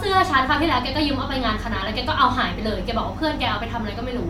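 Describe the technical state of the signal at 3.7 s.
At 3.7 s the speech plays through intact, with no dropout, distortion or other technical fault at that point.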